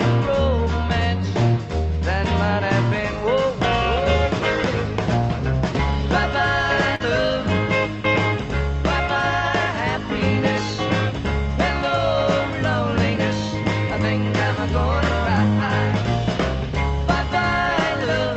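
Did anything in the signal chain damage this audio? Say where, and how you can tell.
Yes: short concealed packet loss at the network stage, 6.95 to 7.02 s. A 40 ms gap was filled by extending the preceding sound, heard as a brief smear.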